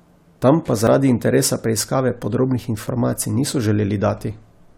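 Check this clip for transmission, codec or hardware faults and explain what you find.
There's one fault here, an overlap between stream segments, heard at 0.87 s and again at 2.88 s. The two events sit about 2 seconds apart, matching the segment length. Each time, neighbouring segments claimed the same stretch of time, so the player trimmed speech that was never actually doubled, about 7 ms the first time and 12 ms the second. The waveform jumps across the gap, giving a small click or skip.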